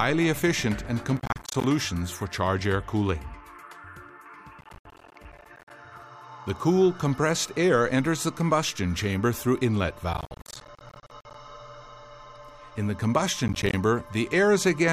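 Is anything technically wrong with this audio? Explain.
Yes. Processor overload crackle appears at 1.17–1.64 s, 4.61–5.70 s, 10.14–11.34 s and 13.48–13.74 s. The processor falls behind and misses a run of short buffer deadlines. Each missed buffer becomes a brief hard-edged dropout of silence, which fits buffers of roughly 10 ms. Ten to fifty of these gaps in quick succession chop the audio into a gritty, tearing crackle. The crackle stops once the load eases.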